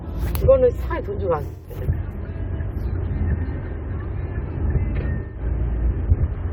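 AAC frame loss with concealment at 1.46–1.74 s and 5.21–5.41 s: the decoder fills each gap from earlier spectra, leaving brief smeared, phasey patches.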